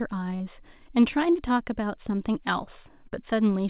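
At 0.36 s and again at 3.08 s there is short concealed packet loss: roughly 40 ms of audio failed to arrive in time each time. The receiver bridged each gap by extending the preceding speech sound for about 40 ms and then 30 ms before blending back into the real signal. Both spots come across as a brief smear or wobble, with the speech possibly losing a short sound. The whole clip is narrowband, with nothing above 4 kHz, consistent with a G.711 call path.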